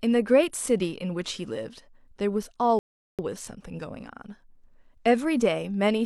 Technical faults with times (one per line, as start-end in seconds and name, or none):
2.79-3.19 rebuffering stall